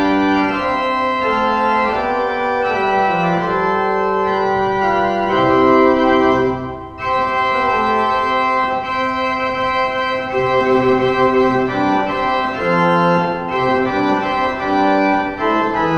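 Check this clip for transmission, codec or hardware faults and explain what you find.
A faint metallic shimmer rides on sibilants and high notes throughout, with a dulled top end. This is imaging from linear upsampling: the rate went from 22 kHz to 44.1 kHz by straight-line interpolation, leaving a weak mirror image between about 11 kHz and 22 kHz, roughly 40 dB down.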